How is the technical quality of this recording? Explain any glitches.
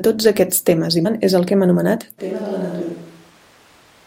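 The recording has two glitches: a brief corruption burst early on and an abrupt change in microphone character that lasts to the end.

At 1.05 to 1.07 s, between "tots aquests temes i" and "és el que hem", a short glitch is audible. This is damaged data in a compressed stream. Corrupted frames throw the decoder out of sync until it finds the next valid frame header.

From 2.2 s to the end, just after "és el que hem", the speech turns roomy and hollow, loses low end, drops about 10 dB, and carries background noise roughly 25 dB below it. This is likely a switch to a distant microphone after the close microphone's signal was lost.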